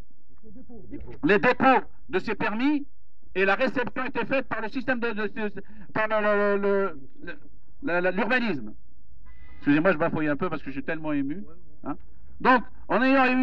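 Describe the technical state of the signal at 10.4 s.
At 10.4 s the signal carries a DC offset, present from start to end of the clip rather than at that moment alone. Somewhere in the chain a constant has been added to every sample, so the whole waveform sits displaced from zero by about -30 dBFS. The offset itself is inaudible, but it eats into headroom on one side of the waveform and appears as a steady component at 0 Hz, the very bottom of the spectrum.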